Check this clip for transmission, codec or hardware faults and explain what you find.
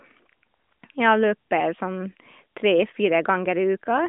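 No transmission, codec or hardware faults are audible in this speech, which comes through the AMR narrowband mobile codec as a telephone-band signal of roughly 200 Hz to 3.5 kHz, with the mild coding texture that fits its 12.2 kbps top rate.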